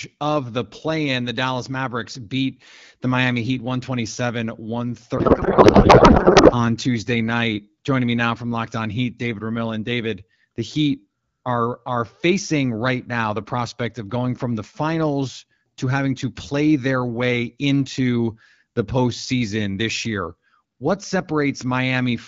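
From 5.17 to 6.55 s, a codec payload misread replaces the speech with garbled, warbling noise that barely tracks it, which fits octet-aligned AMR-WB frames being unpacked as bandwidth-efficient.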